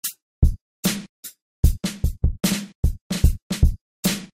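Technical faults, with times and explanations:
0.70–0.84 s, DAB burbling. For about 0.14 s the sound breaks up into burbling. Weak reception let bit errors slip past the error correction into the MP2 audio data, at a rate of very roughly 0.15 percent. Corrupted samples put short blips of noise in individual sub-bands, and corrupted scale factors make sub-bands leap in level for up to a frame. The length points to about six damaged frames in a row.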